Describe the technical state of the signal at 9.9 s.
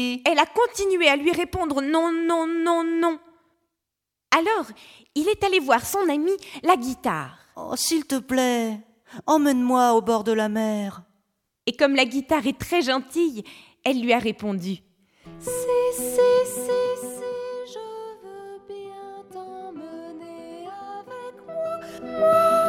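At 9.9 s the signal is intact, with no fault present and the level sitting steady rather than being ridden up or down.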